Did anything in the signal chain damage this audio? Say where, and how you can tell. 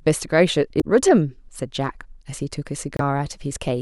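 Yes, codec stage: damaged data in the compressed stream causes brief disruptions at 0.77–0.84 s and 2.97–3.01 s as the decoder misreads frames, then resyncs.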